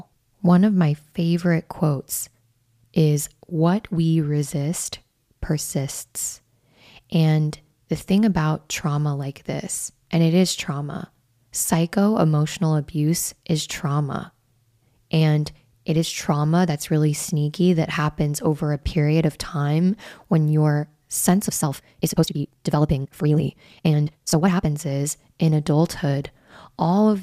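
After "time when your sense", 21.46 to 24.70 s is a time-stretched section: 1.87 times faster, pitch unchanged, rushed, likely from dropped fragments. On a spectrogram, syllables look compressed while harmonics stay put.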